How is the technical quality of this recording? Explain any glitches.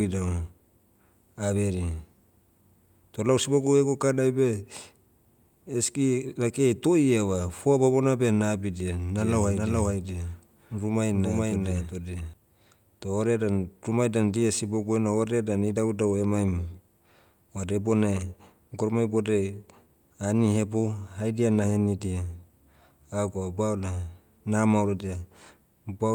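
From 9.17 to 12.33 s, just after "foa bamona beh nabidia", the speech plays twice at once: a full-band copy about as loud as the original trails it by roughly 0.4 s, without room decay, cutting in and out abruptly. This doubled audio track likely comes from a second, slower capture path mixed in.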